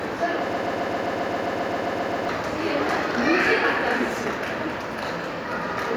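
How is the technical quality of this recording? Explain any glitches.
The technical quality is marred by one clear glitch. From 0.53 to 2.29 s there is a broken-record loop: a fragment of about 133 ms repeats exactly, back to back, 13 times. Whatever should have played in that stretch never arrives. The likely cause is a stalled player or stream that kept resending the last fragment it held. It sounds like a rapid mechanical stutter. On a waveform or spectrogram, identical blocks tile evenly, every 0.13 s.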